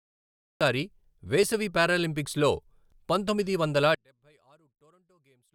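Cut-off start, 0 to 0.61 s: the clip opens on digital silence, and the speech enters abruptly at 0.61 s, partway through a sound. The capture began late, so there is no natural onset or fade-in, just an immediate jump into the middle of speech.

One channel inverted, from 3.95 s to the end, right after "పంతొమ్మిది వందల": the speech drops by about 37 dB and leaves only a faint residue. The likely cause is reversed polarity on one stereo channel, so the centred speech cancels almost completely when the channels are summed to mono.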